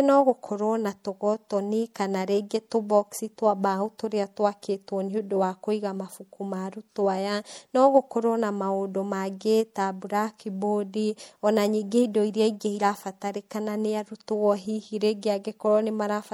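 MP3 compression, throughout: the speech sounds plainly watery and swirly, likely from an encoder at about 64 kbps cutting treble and switching weak frequency lines on and off.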